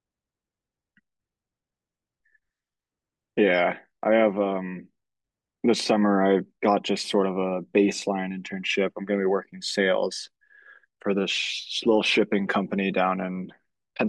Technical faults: none

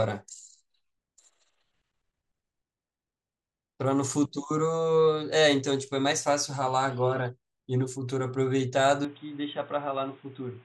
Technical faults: input switched to a poorer device

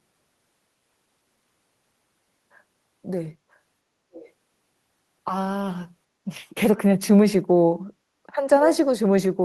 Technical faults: echo leak

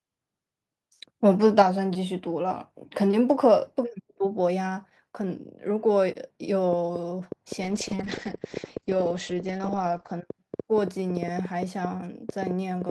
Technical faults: microphone overload; microphone volume stepped down; train of clicks; call bitrate drop

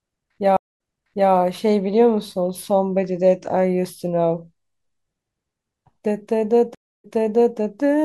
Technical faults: stream reconnect

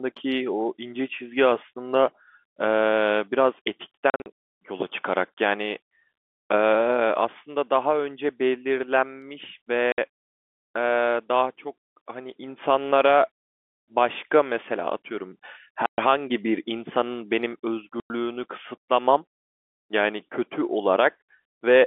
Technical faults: packet loss filled with silence

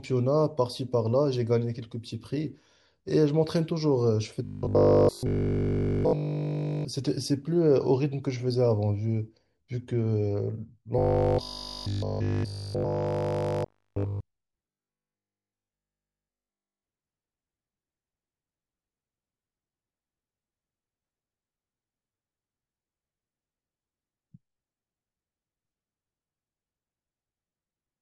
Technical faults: robotic sound from repeated short buffers

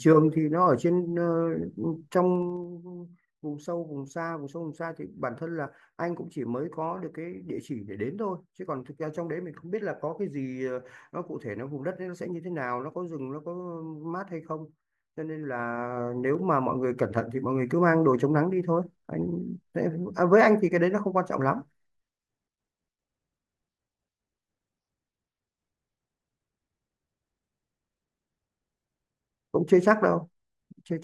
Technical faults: zipper noise

